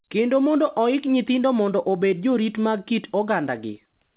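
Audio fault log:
Nothing's gone wrong in this bit of speech; it simply carries the usual narrow telephone sound of A-law G.711 telephone coding at 8,000 samples a second.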